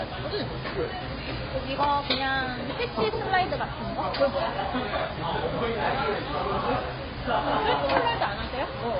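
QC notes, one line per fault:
Throughout: AAC compression artefacts. The audio is dull and heavily damaged, with nothing above 5 kHz. The top octaves are simply gone. The likely cause is an AAC-LC encode at a very low bitrate, which fits a rate of around 16 kbps. With so few bits, the encoder drops the upper band entirely and quantises what remains coarsely. That coarse quantisation leaves the spectrum thin and smeared rather than clean.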